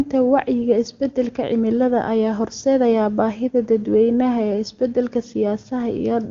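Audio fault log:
The speech carries the full wideband range up to about 7 kHz with no audible roughness from the AMR wideband (HD Voice) codec, which fits its highest rate of 23.85 kbit/s.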